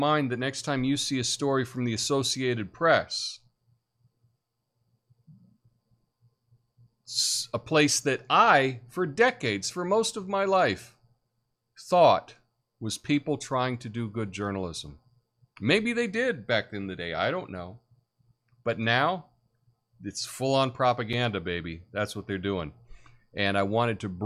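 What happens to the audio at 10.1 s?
Nothing goes wrong at 10.1 s; the audio runs through that moment intact, with no dropout, click or other fault to be heard.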